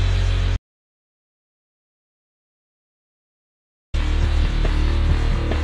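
At 0.57 s the sound cuts off abruptly and the track falls to silence until 3.94 s, an audio dropout to silence lasting about 3.37 s. No room tone or noise floor survives in the gap, which points to the input signal being lost while the recorder kept writing silence, likely a disconnected source or a failed link. When the audio returns it resumes mid-flow, and whatever occurred during the gap is unrecoverable.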